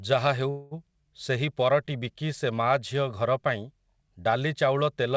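A speech recording carried over a call link whose audio stops at 8 kHz, which fits a G.722 wideband codec at 64 kbps, shows a call audio freeze from 0.50 to 0.74 s. The last sound is stretched into a decaying buzz- or hiss-like fill lasting about 212 ms and never drops to silence. Speech then resumes with "ସେହି ପରଟି", intact but about 212 ms later than before. The likely cause is delayed packets draining the jitter buffer.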